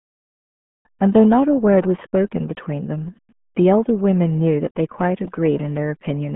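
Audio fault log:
Throughout: RealAudio 14.4 codec. Speech sounds muffled and gargly, with nothing above 3.8 kHz. Heavy coding damage fits an 8 kbit/s dial-up codec.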